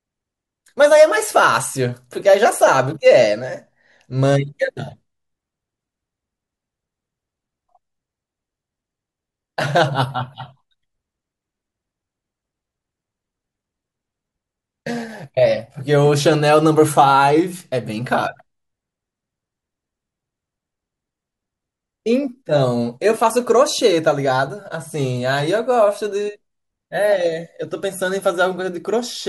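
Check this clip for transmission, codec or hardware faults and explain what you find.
Nothing here points to a transmission, codec or hardware fault; the speech comes through steady and intact the whole way.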